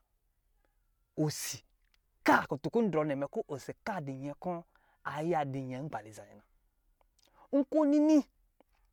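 No audible technical faults here.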